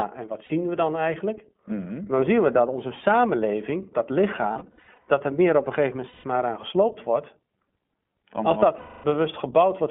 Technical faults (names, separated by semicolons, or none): iLBC codec; lost iLBC frames